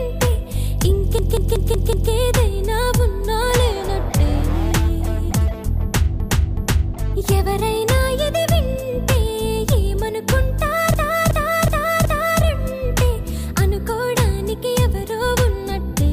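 Repeated frames cause stutters: a 185.8 ms block replays five extra times from 1.19 to 2.12 s, and 371.5 ms blocks replay twice from 6.20 to 6.95 s and four times from 10.94 to 12.43 s. Compressed frames were sent again, adding about 3.16 s overall.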